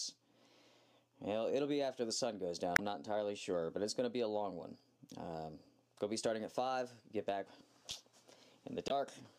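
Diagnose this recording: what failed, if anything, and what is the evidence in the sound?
Codec stage: damaged data in the compressed stream gives brief disruptions at 2.73–2.80 s and 8.87–8.91 s, where the decoder misreads the bad frames and hunts for the next header.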